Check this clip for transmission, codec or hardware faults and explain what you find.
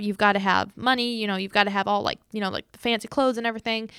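No transmission, codec or hardware faults turn up anywhere in this speech recording.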